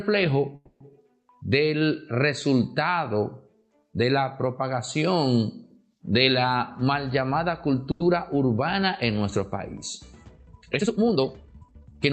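At 0.55 s the sound stops moving forward. The last moment carries on as a fading buzz, then about 100 ms of silence, until 0.82 s. Playback resumes exactly where it stopped. This is likely a call audio freeze. Delayed packets let the jitter buffer run empty, inserting a 250 ms gap.

From 6.54 to 7.74 s the audio runs about 14 percent fast at unchanged pitch. This is a jitter buffer speed-up. The buffer held extra delay, so the receiver trimmed short pitch-period pieces repeatedly, removing roughly 150 ms in total. It sounds hurried.

At 7.91 s comes a short stall from a late packet. A packet missed its slot and the buffer emptied. The receiver held the last sound for 90 ms, until 8.02 s, with a slight buzz or dip. Playback then continued from the same point, losing nothing.

From 10.27 s to the end, the pace suddenly jumps to 1.8 times normal, with pitch kept. This is a time-stretched section, likely software squeezing the audio to fit a length by dropping short pieces. 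It sounds rushed.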